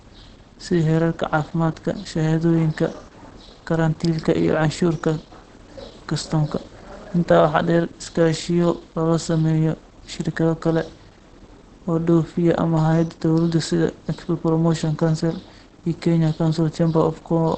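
From start to finish the speech sounds muffled and hoarse, with nothing above about 8.6 kHz. This is likely Opus compression running in its speech-oriented mode, where a low rate near 16 kbps trims the band and models the voice coarsely. The damage is plainly audible. What sets it apart from MP3 artefacts is that there are fewer watery holes in the spectrum and less swirling. The degradation is instead a steady roughness and a dull top end.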